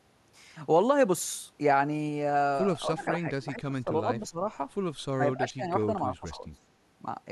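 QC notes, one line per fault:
2.88–4.40 s, 5.16–5.63 s, 6.08–6.60 s: speech suppressed in double talk. The voice sinks and thins in patches. The deepest dip is about 15 dB in the first stretch, where roughly a second is affected. It reaches about 20 dB in the second and about 15 dB in the third, each affecting around 0.3 s. The likely cause is an echo canceller that could not separate the near talker from loudspeaker echo while both sides spoke, so it attenuated both.
2.99–3.05 s: echo leak. A faint, brief ghost of the voice appears about 25 dB below the speech, trailing it by about 242 ms. It is short and scrappy rather than a sustained repeat, and it falls inside the first suppressed stretch. The likely cause is a loudspeaker-side echo canceller that left some of its microphone pickup unremoved and sent that residue back down the line.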